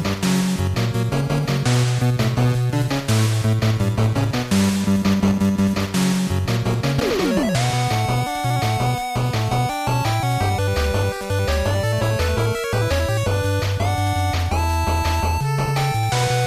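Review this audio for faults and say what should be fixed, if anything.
Two brief corrupt frame decoded events: a blip at 1.98 s, and a louder burst from 6.98 to 7.01 s, near -10 dBFS. Flipped bits in compressed frames made the decoder misplace energy across frequencies. Prevent this with frame checksums and concealment of failed frames.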